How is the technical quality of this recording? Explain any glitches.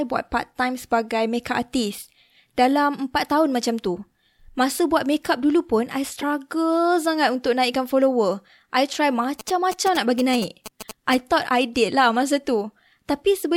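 The recording has two distinct technical faults: a brief decoding glitch and a longer stretch of radio interference.

At 6.19 to 6.24 s, right after "makeup dulu pun I", there is a corrupt frame decoded. Flipped bits in what sounds like a couple of compressed frames were played through anyway, so misread gains and spectral codes placed energy at the wrong frequencies for those frames. It comes out as a short glitch, peaking around -15 dBFS, lasting about 50 ms.

From 9.40 to 11.15 s, between "naikkan follower I try" and "thought I", GSM signalling bursts intrude. A nearby 2G phone sending short groups of radio bursts is being rectified by the audio circuitry, turning the RF envelope into audible sound. The result is a galloping dit-dit-dit of short buzzes with a 217 Hz fundamental, sitting roughly 10 dB below the speech.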